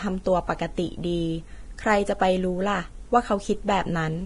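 From start to end, the speech sounds hissy and grainy. Nothing is heard above 10.6 kHz. Consonant attacks are blurred and tones sound rough. This is likely heavy Vorbis compression at a low bitrate, about 30 kbps, with coarsely quantised treble turned into noise.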